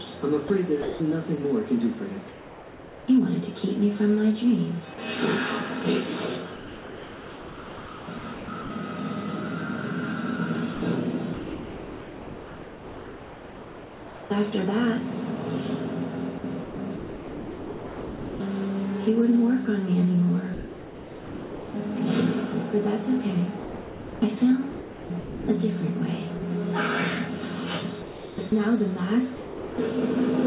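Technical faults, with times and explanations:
0.48–3.08 s, 6.56–8.70 s, 10.74–14.30 s, 16.38–18.40 s, 23.58–26.42 s, 28.02–29.78 s: sound chopped by the voice detector. The sender likely toggled repeatedly between transmitting and comfort noise, replacing 0.8 to 3 s per stretch. The audio turns choppy within the 4 kHz call band.
4.94–4.98 s and 20.54–21.74 s: sound dropped by the voice detector. The detector likely judged quiet sound to be background and stopped sending, so the receiver filled the gap with comfort noise. This is a 40 ms blip at the first point and a 1.2 s stretch of comfort noise at the second.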